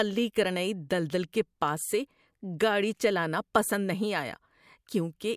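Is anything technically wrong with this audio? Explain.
No, nothing technically wrong stood out on listening to this speech recording.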